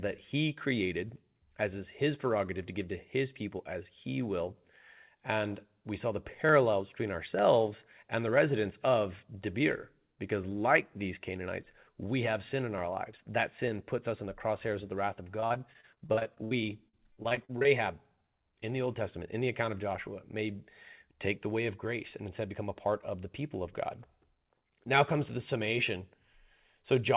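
From 15.24 to 16.53 s and again from 16.89 to 17.66 s you get repeated packet loss, the robotic-sounding kind. Packets keep going missing, and each hole gets papered over by stretching the last bit of sound. Roughly a quarter of each stretch is patched-in filler, with holes up to 64 ms in the first burst and 40 ms in the second. The result is choppy, inside a call band that stops at 4 kHz.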